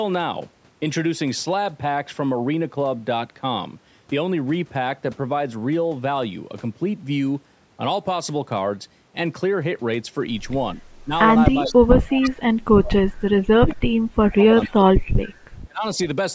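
From 10.75 to 11.11 s the speech dips by about 10 dB, and from 11.54 to 15.03 s it is cut down in pieces by up to about 35 dB. This is speech suppressed in double talk, likely from an echo canceller pulling down the near talker while the far side was also speaking. Inside that stretch, brief echo leak scraps appear at 11.64, 12.22, 13.70 and 14.63 s. Each is a short, faint delayed copy of the speech, about 447 ms behind and about 15 to 25 dB below it, likely where loudspeaker pickup slipped past the canceller. A final suppression from 15.67 to 15.84 s drops the speech by about 30 dB.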